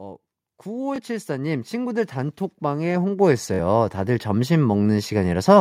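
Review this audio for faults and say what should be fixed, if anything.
Automatic gain rising runs from 0.62 to 5.56 s: the gain control keeps lifting level, about 15 dB overall, so the speech and the background swell together. On a waveform the envelope widens steadily. Fix it by setting a fixed input gain or slowing the automatic gain control.

Bluetooth stutter occurs at 0.96 to 1.00 s, with about 21 ms lost, which sounds like one short slice repeated. It recurs at 3.54 to 3.60 s, with about 43 ms lost, which fits two repeats. Each appears on a spectrogram as identical vertical blocks, followed by a jump forward. Fix it by improving the wireless link or using a wired connection.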